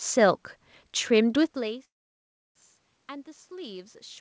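A speech recording with two call-path faults. From 1.36 s to the end, automatic gain rising: the input level drops by about 20 dB and the gain control slowly raises it, so voice and room noise swell together, seen as a waveform envelope and noise floor climbing steadily. A call audio freeze runs from 1.85 to 2.58 s. The sound stalls, briefly trails off, then stays silent for about 0.68 s, appearing as a flat gap in the waveform and a blank vertical band on the spectrogram. The likely cause is packets held up in transit, which emptied the jitter buffer. When the audio resumes it carries on where it stopped, with nothing lost, so everything after it runs about 0.7 s late. Throughout, the spectrogram is empty above 8 kHz, which fits a G.722 call codec.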